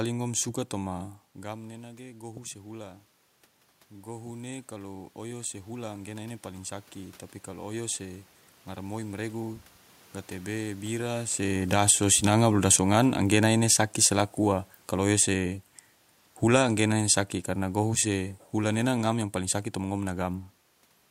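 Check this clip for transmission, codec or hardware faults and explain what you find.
Two faults show up, both from automatic gain control.

Automatic gain rising occurs from 0.9 to 3.07 s, just after "ngom suka", and from 3.91 to 9.66 s, ending before "gatebe bira". The talker moved away, dropping the input about 16 dB. The control raised gain about 5 dB, then about 8 dB. Voice and room noise swell together slowly.

Automatic gain falling runs from 11.45 to 15.53 s, just after "gatebe bira", and from 16.4 to 19.28 s. The control judged the input too loud, or its background noise too strong. It cut gain by about 7 dB, then about 4 dB. The voice starts loud and sinks gradually, and the background sinks with it.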